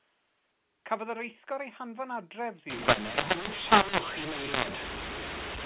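A speech recording carried over G.711 telephone coding, band-limited below 4 kHz in the way 8 kHz sampling produces. From 2.70 s to the end, mu-law and A-law are mixed up. Samples encoded as A-law are being expanded with the mu-law curve, so each 8-bit code maps to the wrong amplitude. Levels scramble, the speech turns harsh and gritty, and the near-silent stretches are pushed up into an audible noise floor.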